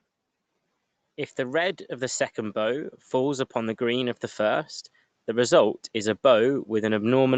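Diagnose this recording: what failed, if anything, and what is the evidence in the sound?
The fault is automatic gain rising in the call processing stage. From about 1.46 s to the end of the clip, the speech and the background noise swell together. The rise is slow and continuous, not a step. That points to the automatic gain control judging the input too quiet and pushing its gain up over several seconds. The noise floor climbs with the voice, so the change is in the gain, not the source. The band stops at 8 kHz, which fits a wideband Opus call path.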